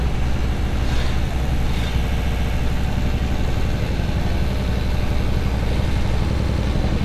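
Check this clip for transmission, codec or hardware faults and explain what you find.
Four bursts of repeated frames occur: 0.58–0.72 s and 4.55–4.65 s each play a block once more, while 2.12–2.53 s and 6.34–6.62 s replay it three extra times. Blocks of 139 ms and 93 ms fit runs of six and four compressed frames being sent again. Each repeat is heard as a stutter, and the clip lengthens accordingly.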